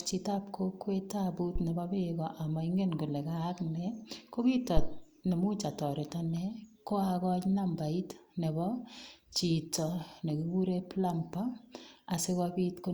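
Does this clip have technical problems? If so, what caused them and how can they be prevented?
Yes. A phantom power thump occurs at 1.56–1.61 s, after "chitab kokwet tabut", peaking at about -22 dBFS and decaying in 13 ms. A second occurs at 4.77–4.96 s, after "kayaak ne ko kit", peaking at about -14 dBFS with a 42 ms decay. Switching the supply on a live input sends a voltage step through the coupling capacitors, heard as a low thud. To prevent it, mute the channel or pull the fader down before toggling phantom power.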